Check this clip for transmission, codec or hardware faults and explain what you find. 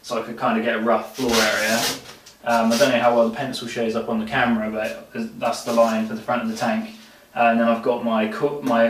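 Nothing here gives me any cause for concern, so there's no fault to point to in this clip.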